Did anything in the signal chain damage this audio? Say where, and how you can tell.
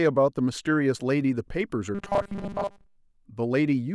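Yes. At the driver or buffer stage, fresh audio likely arrived too seldom, so the software kept replaying a 5 ms slice and dropped most of the real signal. From 1.95 to 2.96 s this gives robotic sound from repeated short buffers: a rigid, metallic 200 Hz buzz over the speech.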